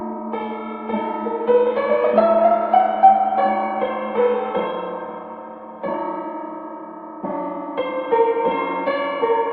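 No technical faults can be heard anywhere in this recording of sounds. It has come through a working WebRTC call path, and the top end stops at 12 kHz, which fits an Opus codec running at around 40 kbps.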